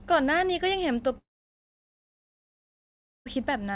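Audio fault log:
1.18–3.28 s long network dropout: the sound breaks off into a brief fading buzz that continues the last fragment, then about 2 s of near-silence before the speech resumes with the missing stretch gone rather than delayed. The likely cause is a lost run of roughly 2 s of audio that the receiver's concealment could cover only momentarily. Unlike a short packet-loss glitch, the gap lasts long enough for the fill to die away completely.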